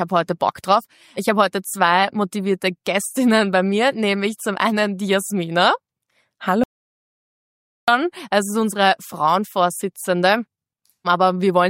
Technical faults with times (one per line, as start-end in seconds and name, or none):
6.64-7.88 audio dropout to silence